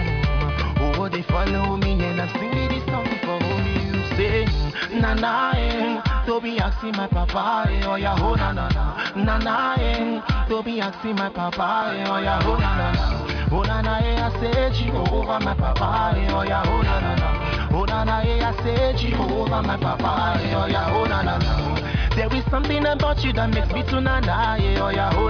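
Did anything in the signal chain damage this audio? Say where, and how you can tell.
No, nothing along the signal chain has left an audible mark on this audio, and the signal holds steady throughout.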